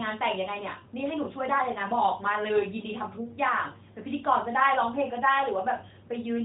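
A speech recording carried over the AMR narrowband mobile codec, band-limited to 4 kHz with a light coding texture that fits a 12.2 kbps mode. At 5.78 to 5.82 s there is one lost AMR speech frame, about 20 ms long. Radio errors broke that frame's checksum, so the decoder filled the gap by repeating the previous pitch and vocal tract settings at reduced gain. The result is a short dip or warble before the voice resumes.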